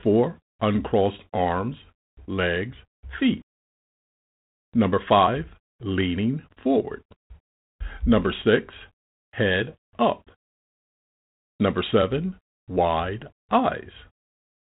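Nothing stood out on listening to this speech recording.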